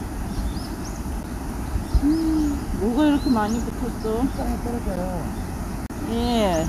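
A recording of everyday sound with four blocks of digital silence, where the signal drops abruptly to silence and returns with no fade. Three are about 11.6 ms long, at 1.23 s, 3.70 s and 4.96 s, and are heard as ticks; their identical length fits a 512-sample buffer left unfilled in time. A longer 35 ms hole from 5.86 to 5.90 s spans roughly three such buffers and comes across as a brief dropout.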